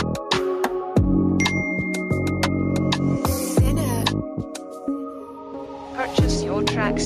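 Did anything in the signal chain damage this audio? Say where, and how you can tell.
Yes. Gain pumping runs through the whole clip. The gain swings by roughly 5 dB, which squashes loud and soft parts together. The likely cause is input gain set far too high, with a fast limiter clamping each peak.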